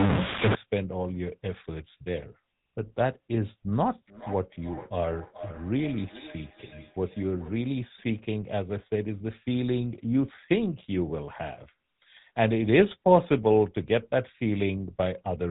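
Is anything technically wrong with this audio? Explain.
Yes, there are three problems.

Throughout, the speech has the buzzy, gravelly roughness of the GSM full-rate codec, consistent with 13 kbps. The vocal tract is modelled and driven by sparse pulses, and nothing above 4 kHz survives. That grit sets it apart from plain band-limiting.

From 0 to 0.55 s there is distortion with hiss filling the gaps, likely a stuck bit in the data path. About half of the samples jump by a fixed amount, so even silence becomes noisy.

From 3.87 to 7.59 s a feedback echo between two devices returns each word about every 400 ms, at most about 17 dB below the speech. Each return sounds thinner and more ringing, unlike the single clean repeat of an ordinary echo.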